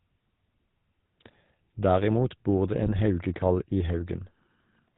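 Throughout, the speech has passed through the GSM full-rate codec. It rebuilds the voice from a vocal-tract filter fed by regularly spaced pulses, keeping only a thinned-out excitation, which fits the 13 kbps full-rate scheme. The damage is plainly audible: nothing survives above 4 kHz, so the sound is narrow and dull, and the pulse-train excitation adds a buzzy, gravelly roughness to every voiced stretch.

From 2.83 to 3.00 s, just after "bor det", GSM bit errors reach the decoder. Corrupted filter, pitch and gain values make it rebuild each affected frame with a distorted spectrum or wrong level. The damage spans about eight 20 ms frames, at an error rate of about 1.6 percent. For that moment the voice collapses into squawks, pops and a gargling burst.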